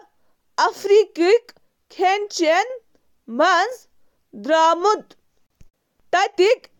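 Separately encoded pieces were joined with encoder delay and padding left in. At 5.47 s this gap at a join opens a 38 ms gap with smeared edges before the speech carries on.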